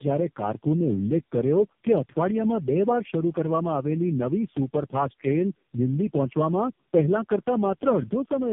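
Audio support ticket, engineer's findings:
Tandem speech coding, throughout: call re-encoded at several network borders, consistent with roughly four low-rate speech codecs in series, AMR-NB among them. Each stage codes prior artefacts. Result: rough, muffled, warbly speech, nothing above 3.4 kHz.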